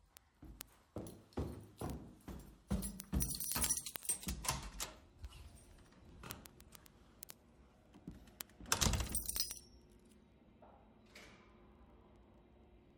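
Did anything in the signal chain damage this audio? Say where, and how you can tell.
Yes. Word clock ticks run through the whole clip, from 0.13 s to 12.97 s. They come at a steady rate, about every 40 ms, hundreds in all. Each is a sharp click, and their strength varies. The damage happened at a digital interface between devices. The receiver ran on its own clock, not locked to the sender's. The mismatch was several hundred parts per million. Each time the clocks slipped, one sample was dropped or repeated, which produced a tick.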